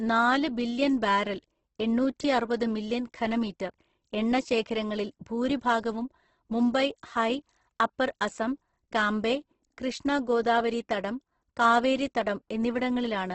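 From start to finish the speech carries heavy damage of the kind typical of Opus compression, likely at a very low rate in the codec's CELT music mode. Nothing is present above 8.2 kHz, so the top octave is gone and the sound is confined to a wideband range. With too few bits, the high bands are filled by folding lower ones or with noise, so voiced sounds come out grainy and rough rather than hollow, in a way that points to a bitrate near 12 kbps.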